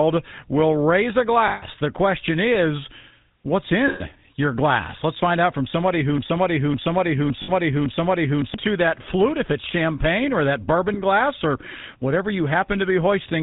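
Throughout the recording the speech has a buzzy, gravelly roughness, and nothing survives above 4 kHz. This is the sound of the GSM full-rate codec, consistent with its 13 kbps mode. It rebuilds the voice from a vocal-tract model driven by a sparse, regularly spaced pulse train that keeps only a third of the excitation samples. That coarse excitation causes the plainly audible grit, and the narrow band removes the upper frequencies.

From 1.48 to 1.64 s the sound freezes into a rough, metallic ring. This is lost GSM frames: about 140 ms went missing, which fits seven 20 ms frames. The decoder filled the gap by replaying the last good frame's settings. A shorter ring of about 120 ms follows from 3.88 to 4.01 s, between "question is what's" and "your glass".

From 6.18 to 8.54 s a fragment of about 0.56 s repeats exactly, back to back, four times before the audio resumes with "that flute if it's". 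This is a broken-record loop. A stall in the player, encoder or stream likely left the last held fragment cycling, and the audio that belonged in that stretch is gone. Within this stretch, from 7.42 to 7.51 s, just after "find out from", another lost-frame ring of about 60 ms appears. The last one is a brief 20 ms ring from 10.94 to 10.98 s.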